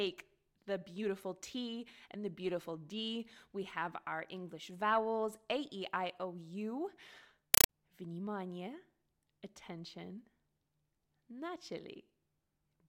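From 7.54 to 7.69 s, a compressed stream played as audio: a Dolby Digital (AC-3) bitstream, which fits about 256 kbps, was taken as ordinary samples and not decoded. Its frames become 5.33 ms noise bursts with silent padding, 31.25 per second, so the speech gives way to very loud, chattering static.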